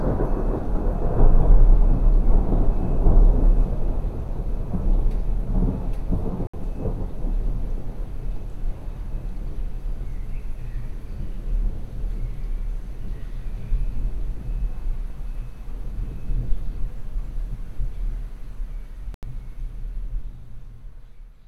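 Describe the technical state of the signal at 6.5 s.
At 6.47 s the signal drops into a block of digital silence lasting 64 ms, returning at 6.54 s. Samples were zeroed, likely through a buffer not filled in time. The sound cuts out and back with no fade, unlike a faded dropout or concealed gap.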